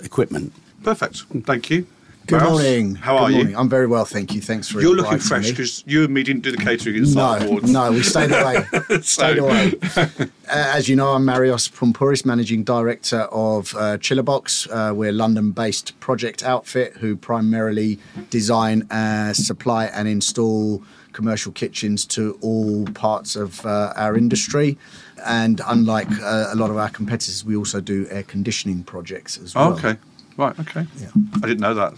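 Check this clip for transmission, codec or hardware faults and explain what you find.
Nothing found on listening; no transmission, codec or hardware fault is audible anywhere in the clip.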